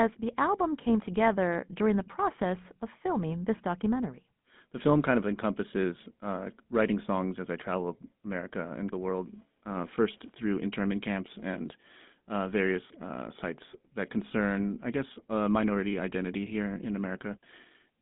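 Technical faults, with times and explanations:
Throughout, GSM full-rate codec: speech is confined to 150 Hz to 3.6 kHz, nothing above 3.8 kHz; coarse pulse excitation gives plainly audible buzzy, gravelly roughness.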